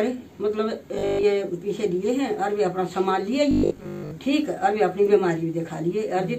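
Robotic sound from repeated short buffers at 0.95–1.25 s and 3.51–4.11 s: a rigid 50 Hz metallic buzz, likely from a starved stream repeating 20 ms segments.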